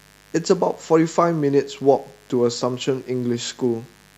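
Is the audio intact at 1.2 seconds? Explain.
No. Mains buzz runs through the whole clip, including 1.2 s. Sharp switching spikes from the 50 Hz supply leak into the signal twice per cycle, building a harmonic series into the kilohertz range that sounds like a constant raspy buzz about 30 dB below the speech.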